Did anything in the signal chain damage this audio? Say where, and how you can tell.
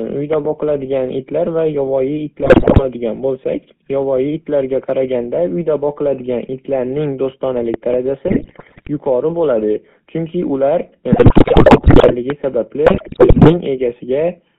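Yes. The whole clip passed through a codec: the GSM full-rate codec. The speech is confined to roughly 150 Hz to 3.5 kHz and carries a constant buzzy, gravelly roughness, which fits the 13 kbps GSM full-rate encoder. It models the vocal tract and drives it with a coarsely sampled pulse excitation.

Loud pops sit on top of the speech in the analogue wiring stage, peaking around 15 dB above it. There are double pops at 0.33–0.47 s and 7.74–7.96 s, and a single one at 12.30–12.32 s. The speech continues underneath each one, so this is an added voltage transient, likely from a plug, switch or static discharge.

GSM bit errors from the network radio link corrupt the speech at 2.42–2.84 s, 8.28–8.88 s, 11.12–12.14 s and 12.86–13.57 s. There the speech breaks into squawks, pops and gargling. Flipped bits reaching the decoder distort the filter, pitch and gain parameters frame by frame.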